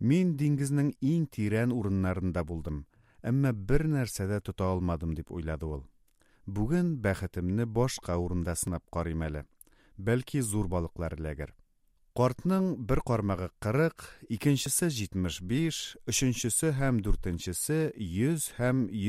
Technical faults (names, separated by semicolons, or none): audio missing between chunks